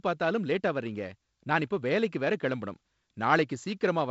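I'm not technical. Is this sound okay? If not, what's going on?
Yes, I hear no faults here.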